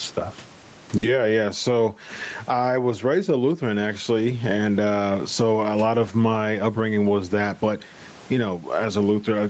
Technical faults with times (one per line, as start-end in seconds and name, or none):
0.00-9.49 gain pumping
0.97-1.05 short stall from a late packet